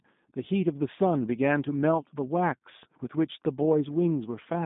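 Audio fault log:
Throughout, G.729 codec: the speech sits in a narrow 150 Hz to 3.7 kHz band with nothing above 3.8 kHz, and it's plainly rough and synthetic, which fits an 8 kbit/s G.729A stream rebuilding speech from a filter, pitch predictor and sparse pulses.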